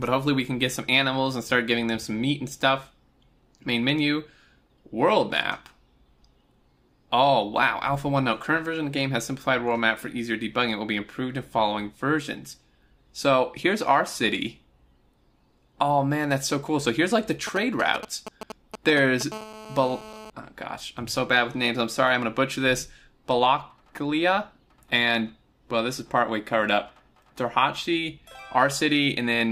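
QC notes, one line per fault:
17.47–19.23 s: GSM signalling bursts. A galloping dit-dit-dit of short 217 Hz buzzes sits roughly 10 dB below the sound. A nearby 2G phone is signalling in brief groups of radio bursts. The audio circuit rectifies each group into a short buzz.
19.32–20.30 s: GSM phone buzz. A hard, raspy 217 Hz buzz, rich in harmonics, runs steadily at about 16 dB below the sound. The phone is now in a call, transmitting 217 bursts per second. The circuit rectifies that pulse train into a tone.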